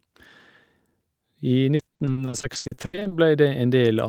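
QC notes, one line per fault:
1.75 to 3.13 s, repeated packet loss (robotic sound): a quick run of short dropouts, the longest about 80 ms, each patched by stretching the previous sound, so about half of this stretch is filler and the speech turns choppy with pieces missing.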